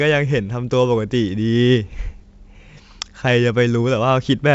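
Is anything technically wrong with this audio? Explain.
No, nothing technically wrong is audible in this speech.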